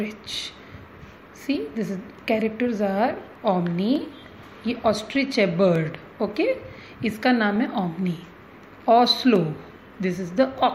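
From 0.35 s to 10.56 s, a click recurs every 0.6 s, about twenty in all. These are likely clock drift buffer slips. Two clocks disagree by roughly 500 ppm, so the buffer drifts and a short block of samples gets dropped or repeated.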